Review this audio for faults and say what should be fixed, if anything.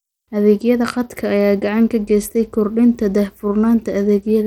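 Throughout the speech there is plainly audible codec damage, likely from Bluetooth SBC compression at a rate that fits about 96 kbps. With few bits per sub-band, the upper bands are coarsely quantised, giving gritty, flickering treble. A spectrogram shows patchy, speckled energy in the high bands, with nothing above 20.1 kHz. Route audio over a wired connection or a higher-quality Bluetooth codec, or raise the SBC bit pool.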